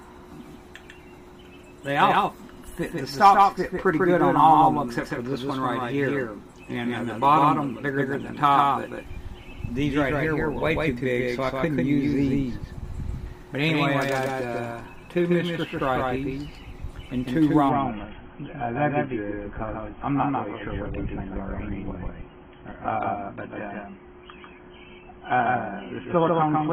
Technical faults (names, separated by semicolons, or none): doubled audio track; adaptive stream at a lower bitrate